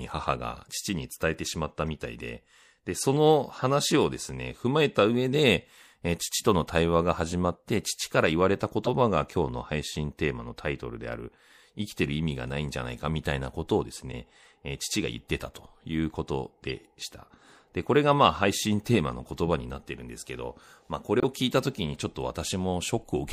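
MP3 compression affects the entire recording. The speech has a watery, swirling texture, consonant onsets sound smeared, and the top end is dulled. The likely cause is a low-rate MP3 encode, consistent with around 64 kbps. At that rate the encoder cuts the treble at a fixed point and drops weak frequency lines, which flicker on and off from frame to frame. That produces the swirl and the plainly audible codec damage.

Corrupt frame decoded events occur at 1.87 s, 3.59–3.63 s, 8.85–8.91 s, 14.12–14.16 s, 16.69–16.71 s and 18.09–18.12 s. In each, flipped bits in a compressed frame were played anyway, so misread gains and codes put energy at the wrong frequencies. Each sounds like a short chirp or burst of noise spanning one or two frames. The event at 1.87 s is faint, and the one at 8.85 s is the loudest.

Corrupt frame muted occurs at 21.20–21.25 s. The decoder rejected a damaged frame, and the player substituted silence. 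The result is an abrupt hole of about 44 ms, which fits a single dropped MP3 frame. Timing is preserved, so the speech resumes at its proper place.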